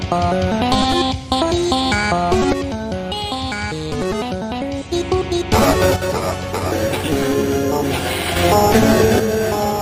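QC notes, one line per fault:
2.53–4.93 s, 5.96–8.36 s and 9.2–9.82 s, one channel drops out: the sound falls abruptly by about 6 dB for 2.4 s, 2.4 s and 0.6 s, the last running to the end. Likely one stereo channel going silent, halving the shared content in the mono sum.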